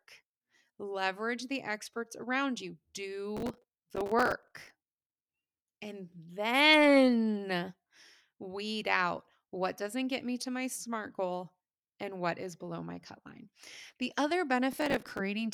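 Speech, with processor overload crackle at 3.37 to 4.70 s and again at 14.73 to 15.19 s. Gritty tearing rides on the sound. Dozens of tiny buffers, around 5 ms each, missed their deadlines. Each gap was filled with stale audio, leaving hard edges.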